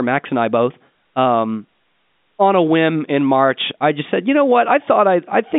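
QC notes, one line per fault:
No faults to note; the speech comes through the ordinary telephone-band path with nothing to log.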